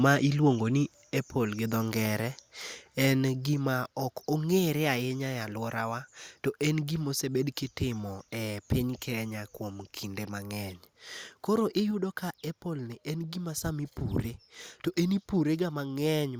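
At 1.02 s the speech drops in level all at once, by about 4 dB, and the background noise drops right along with it. It happens again at 3.54 s (about 3 dB), 11.91 s and 15.42 s (about 2 dB each). Each step is abrupt, not a fade, so it likely comes from the microphone volume being stepped down, with the call software cutting the device's input gain in a single move.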